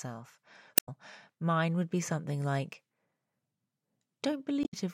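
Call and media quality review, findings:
Damaged data in a compressed stream, 0.75–0.89 s, just before "mine would be something", and 4.61–4.74 s. Brief blip-like glitches in the speech. Decoder fault: corrupted frames misread or rejected, sync lost until the next frame header.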